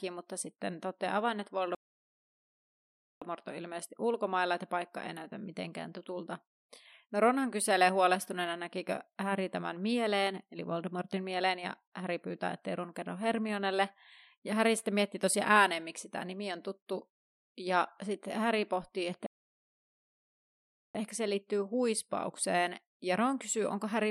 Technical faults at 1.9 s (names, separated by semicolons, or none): playback stall